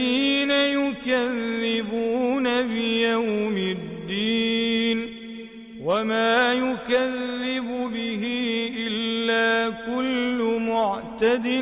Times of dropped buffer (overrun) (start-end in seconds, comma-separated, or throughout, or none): none